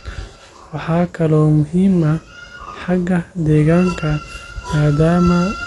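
From start to finish the speech sounds dull and muffled, with a rough, fluttering grain clinging to the voiced sounds and nothing heard above about 11.4 kHz. This is plainly audible damage, most likely from Dolby Digital compression at a low bitrate, one that fits roughly 64 kbps. Short of bits, the encoder cut the top of the band and left many frequency lines empty, and the decoder filled those gaps with noise.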